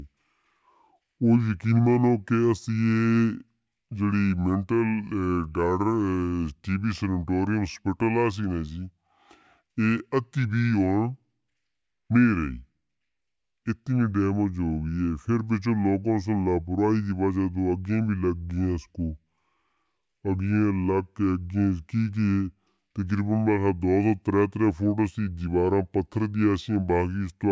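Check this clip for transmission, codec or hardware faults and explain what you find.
One fault runs through the whole clip: a wrong sample rate. The speech plays at about two-thirds speed and sounds roughly seven semitones low, which fits audio recorded at 24 kHz being played back at 16 kHz without conversion. Because tempo and pitch drop together by the same ratio, voices sound slow and deep. A pitch-shift fault would change pitch alone, and a time-stretch fault would change speed alone.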